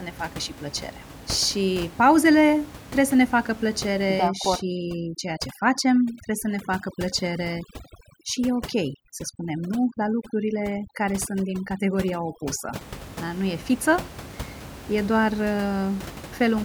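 Overdone noise removal runs from 4.28 to 12.81 s. An aggressive noise reducer pushes individual frequency bands down whenever they approach its noise estimate. The room noise, which sits about 16 dB below the speech, drops and breaks up into twinkling specks.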